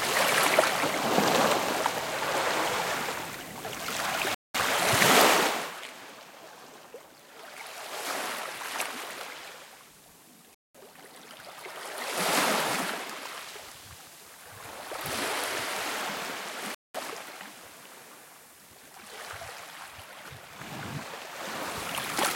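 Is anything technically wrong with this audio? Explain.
Yes. The audio was delivered in chunks of about 6 seconds, and the joins were not closed up. A silent hole of 200 ms with abrupt edges sits between chunks at 4.35, 10.55 and 16.75 s. This is a gap between chunks: nothing is missing, but the sound halts briefly at each regular boundary before resuming.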